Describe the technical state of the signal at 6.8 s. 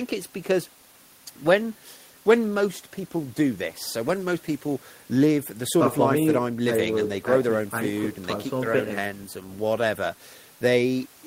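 At 6.8 s the speech signal is intact, with no audible technical fault at that moment.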